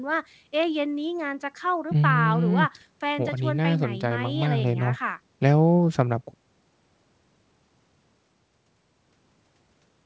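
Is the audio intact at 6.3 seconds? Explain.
Yes, the speech at 6.3 seconds is intact, with only the normal character of a call path, where the G.722 codec leaves nothing above 8 kHz.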